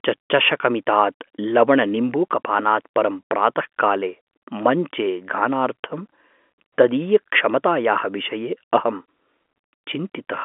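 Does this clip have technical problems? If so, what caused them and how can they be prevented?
No technical problems here.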